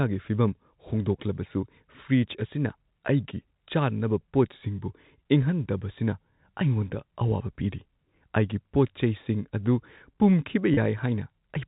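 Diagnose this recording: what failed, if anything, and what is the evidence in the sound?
Network stage: packet loss with pitch repetition at 10.74 to 10.77 s. A 30 ms gap, consistent with one lost packet, was filled by looping the last pitch period, so the sound briefly holds with a buzzy tone. A spectrogram shows frozen, flat harmonics, and the waveform shows identical repeated cycles.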